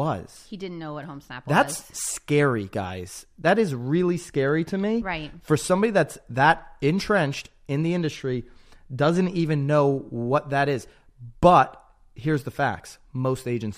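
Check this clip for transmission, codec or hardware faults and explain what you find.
Nothing audible points to any transmission or hardware problem.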